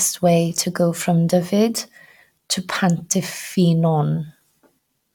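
No audible technical faults.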